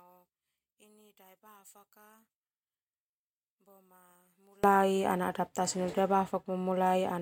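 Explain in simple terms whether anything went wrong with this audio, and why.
Something did go wrong at the start. From the beginning to about 4.64 s, the speech drops almost to nothing and comes back only as a faint trace. The likely cause is one channel inverted: one side of the stereo pair got its polarity flipped. When both sides are added together for mono playback, the shared centre sound cancels itself out. After 4.64 s the speech returns at full strength.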